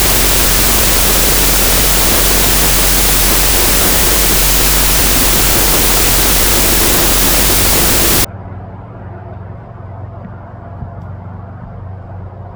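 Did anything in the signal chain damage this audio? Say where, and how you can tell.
Yes, at the sample-format conversion stage, a wrong sample width from 0.0 to 8.25 s. The sound there is loud, broadband noise with the original faintly buried inside. It plays at half speed, an octave low, which fits 32-bit float data being read as 16-bit integers. Each real sample is split into two mismatched values, so only some keep the top bits of the signal. On a spectrogram the section is a dense wash across all frequencies with faint, stretched traces of the original.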